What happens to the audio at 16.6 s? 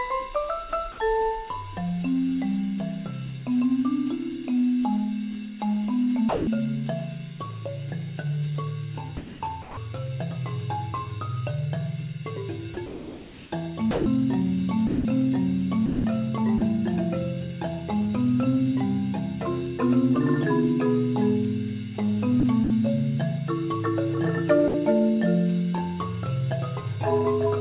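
Sound chopped by the voice detector, from 15.86 to 16.61 s: about 210 ms of sound gives way to comfort noise, likely from voice-detector switching, showing as smooth, featureless noise patches in the spectrogram.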